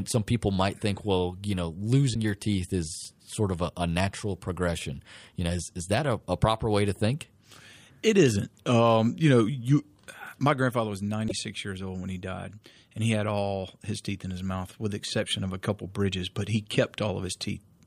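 Speech, with two brief glitches at 2.13 to 2.16 s and 11.27 to 11.32 s, where the audio skips ahead; likely a broken MP3 bit reservoir after dropped frames.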